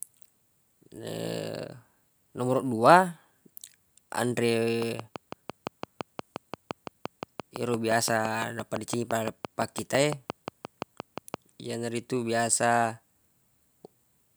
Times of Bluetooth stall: none

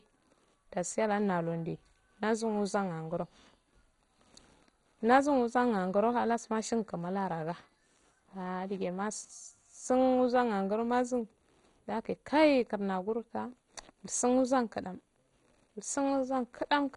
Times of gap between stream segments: none

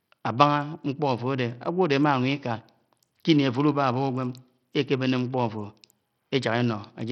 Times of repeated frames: none

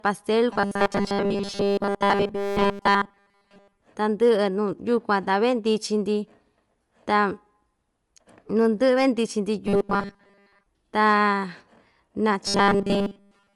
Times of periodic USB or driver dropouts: none

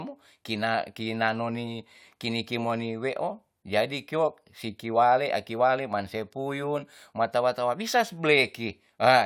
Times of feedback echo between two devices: none

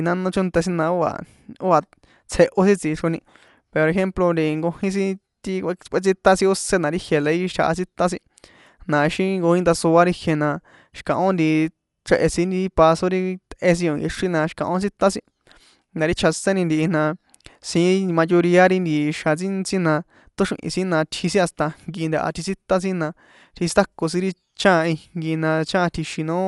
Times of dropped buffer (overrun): none

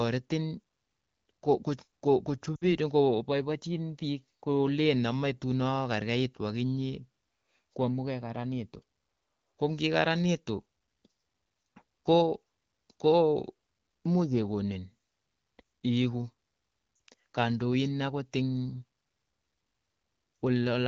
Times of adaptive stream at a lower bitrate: none

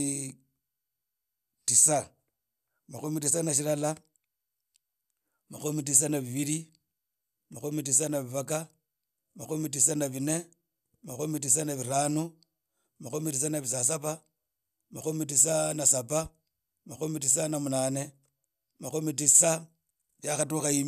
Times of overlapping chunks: none

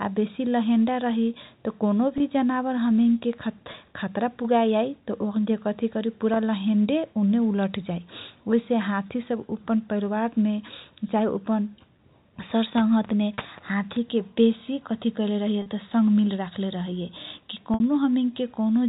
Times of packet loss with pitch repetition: 2.18-2.20, 3.72-3.74, 6.34-6.36, 13.34-13.38, 15.62-15.66, 17.74-17.80

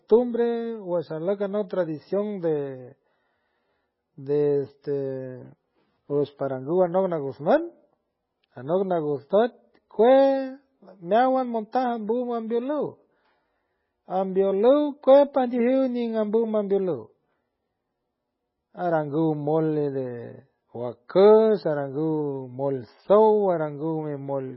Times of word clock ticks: none

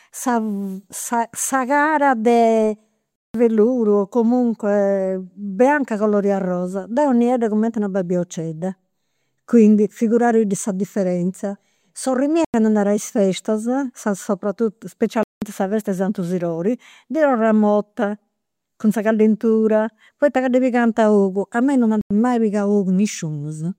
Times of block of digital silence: 3.16-3.34, 12.45-12.54, 15.23-15.42, 22.01-22.11

